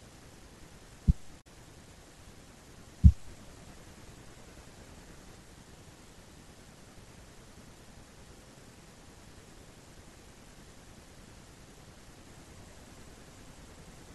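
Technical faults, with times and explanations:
1.37 to 1.46 s, damaged data in a compressed stream: there's a short glitch in the speech here. A stretch of the encoded data got corrupted, so the decoder misread those frames, lost sync, and had to hunt for the next good frame header before playback settled again.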